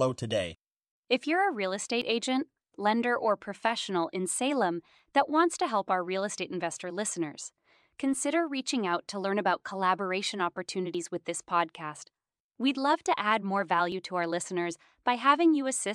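A processor likely losing a sliver each time it swaps 3-second chunks causes audio missing between chunks: abrupt joined skips of about 20 ms at 2.02, 4.99, 10.95 and 13.92 s.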